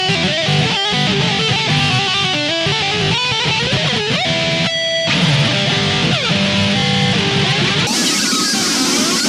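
Bluetooth stutter: audio packets arrived late or went missing, so the receiver replayed its last slice, a brief buzzing repeat at 2.62 to 2.66 s, consistent with two lost packets, and at 6.80 to 6.82 s, consistent with one. From 7.87 s to the end, a section at the wrong speed, likely from playback against the wrong clock, runs 1.64 times fast, pushing the sound about ten semitones higher and hurried.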